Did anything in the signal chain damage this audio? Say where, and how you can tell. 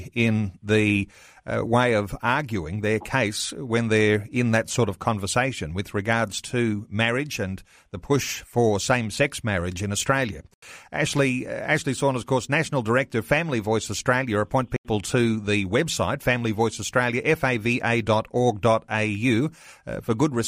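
Yes. The driver likely twice failed to fill its output buffer in time, leaving 85 ms blocks of digital silence at 10.54 and 14.76 s.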